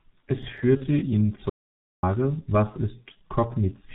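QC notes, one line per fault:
Throughout: G.723.1 codec. Heavily muffled, hoarse speech with nothing above 4 kHz and smeared consonants, consistent with this 30 ms frame codec running near 6.3 kbit/s.
0.77–0.87 s: VoIP packet loss concealed by the speech codec. A brief stretched sound fades as the decoder extrapolates a missing 30 ms frame. The voice stays distorted until 0.87 s.
1.50–2.03 s: audio dropout to silence. Speech cuts off mid-flow into about 0.54 s of silence with no room tone, likely from input loss while the recorder kept writing silence.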